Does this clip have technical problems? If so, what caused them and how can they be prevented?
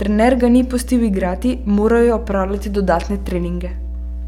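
Yes. A steady low 60 Hz tone with low harmonics runs beneath the speech for the whole clip, fairly loud at about 10 dB below it. This is mains hum: a ground loop or nearby transformer couples the power line into the signal. To prevent it, power all equipment from one grounded outlet, use balanced cables or a ground-lift isolator, and keep cables away from transformers.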